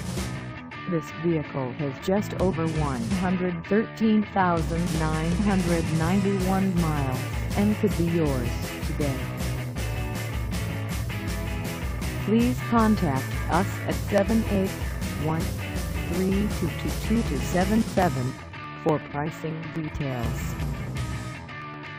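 From 13.81 s to 21.87 s, periodic USB or driver dropouts appear. Every 0.124 s roughly a millisecond of audio is skipped outright, around seventy times in all. Each splice leaves a tick wherever there is signal, so the sound carries an even, rapid clicking pattern.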